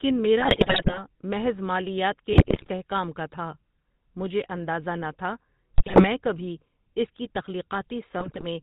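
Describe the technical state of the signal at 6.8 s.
At 6.8 s the speech carries GSM full-rate codec damage, present throughout: pulse-driven vocal-tract coding, likely at 13 kbps, gives a buzzy, gravelly roughness, and the spectrogram shows nothing above 4 kHz.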